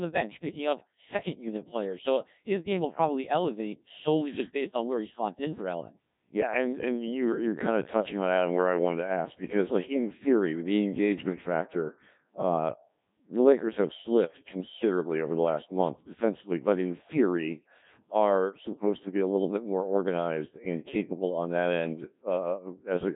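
From start to finish the speech has been through a Codec 2 vocoder, and the damage is heavy: the decoder rebuilds everything from sine waves, so it comes out robotic and buzzy, nothing above 3.8 kHz, which fits a very low rate around 1.3 kbit/s.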